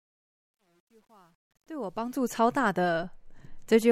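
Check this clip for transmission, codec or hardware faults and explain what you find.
The opening of the speech carries one fault, truncation distortion on a fade, from 0.0 to 2.4 s. As the fade-in rises, the quiet start sounds gritty and grainy. Between 0.0 and 1.76 s the distortion is at its worst, and it persists until 2.4 s. The gain stage applying the fade discards low-order bits without dither, so at low levels the waveform collapses into a few coarse steps. The coarseness fits a stage holding only about 10 bits.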